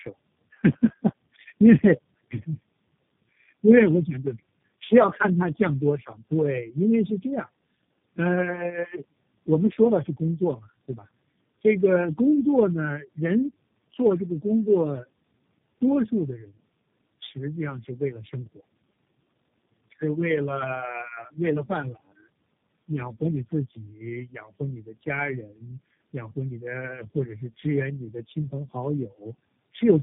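The call was carried over several network links with different speech codecs and was decoded and re-encoded at each boundary, so each low-rate coder worked on the already damaged output of the one before. The result is tandem speech coding throughout the speech: rough, muffled, warbly speech with nothing above 3.7 kHz, degraded beyond what a single codec would produce. The buildup fits three low-bitrate speech coders in series, the last being G.729A.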